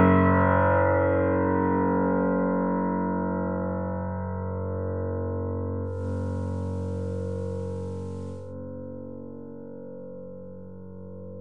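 At 5.83 s the digital radio blends to analogue. The receiver loses its digital signal and cross-fades to the FM broadcast of the same station. The cross-fade takes 260 ms. A layer of hiss enters, sitting roughly 35 dB below the sound. The level shifts by about 1 dB as the FM path takes over. At 8.56 s the receiver blends back to digital, and the hiss goes away.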